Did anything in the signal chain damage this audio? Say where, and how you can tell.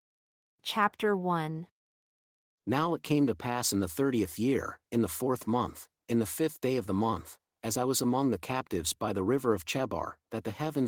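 No, nothing in the signal chain damaged this recording.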